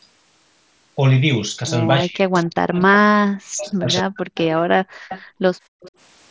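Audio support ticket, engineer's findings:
Speech suppressed in double talk, 2.01–2.80 s and 3.09–4.40 s: near-end speech dips by up to about 40 dB for roughly 0.7 s, then roughly 1 s. Likely the AEC attenuating both sides while the far end talks. Partial, ragged loss rather than the clean silent gap of a packet dropout.

Echo leak, 4.35–4.41 s, 5.09–5.22 s, 5.81–5.91 s: delayed copy of the speech at a fixed 273 ms lag, about 30, 15 and 25 dB below the direct level. Likely residual loudspeaker echo passing the canceller. Discrete repeat at constant delay, not diffuse room reverb.

Background gated by the echo canceller, 4.83–5.81 s: room tone drops by up to about 35 dB over roughly 0.7 s in total, then snaps back when the canceller releases. Differs from noise-suppressor pumping because the dips follow loudspeaker playback, not near-end pauses, heard within the 8 kHz band of the mSBC link.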